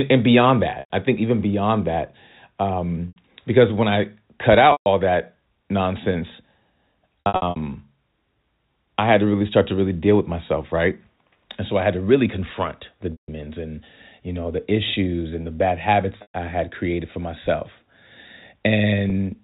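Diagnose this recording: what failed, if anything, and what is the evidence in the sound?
The network stage is dropping packets, and the receiver covers the holes with packet loss concealment by pitch repetition. You get gaps at 0.74 s (right after "and beyond", scattered over 160 ms), 3.08, 4.72, 7.2 (spread across about 360 ms), 13.12 (after "to really confront the"), 16.18 and 19.1 s. The shorter ones sound like a buzzy held note as the last pitch cycle loops. The 100 to 160 ms runs fade toward silence before the speech cross-fades back in. The G.711 telephone band carries all of it.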